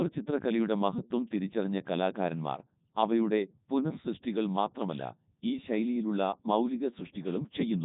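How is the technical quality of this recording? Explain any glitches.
Technical quality is poor. The whole recording has been through the Codec 2 vocoder, and it's heavily damaged from start to finish. Codec 2 doesn't keep the waveform. It sends only pitch, voicing, energy and a rough spectral envelope, then rebuilds the speech from sine waves, which is why everything sounds robotic and buzzy. This is the top 3.2 kbit/s mode, and there's nothing at all above 3.8 kHz, so it also sounds dull and boxed-in.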